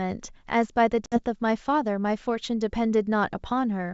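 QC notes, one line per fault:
1.06–1.18 s, packet loss on an ADPCM call: about 60 ms of audio, a few packets' worth, drops to hard-edged silence. The decoder's predictor and step size desynchronise, so speech re-enters slightly distorted, which is what distinguishes it from a clean dropout.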